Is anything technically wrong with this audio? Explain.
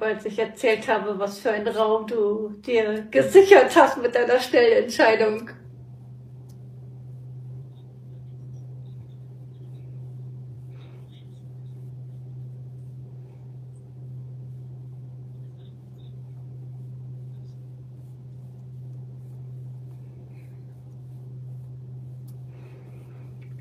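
Yes. There are two short glitches. A brief chirp or blip cuts into the sound from 7.57 to 7.63 s, and a second, even shorter one lands at 10.50 s. Both are damaged data in a compressed stream. At those points some of the encoded bytes are corrupt, so the decoder misreads the affected frames, loses its place and hunts for the next valid frame header before normal playback resumes.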